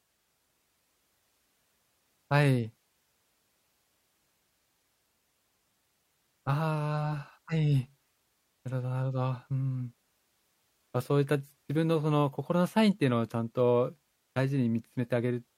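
No technical faults can be heard in this speech recording.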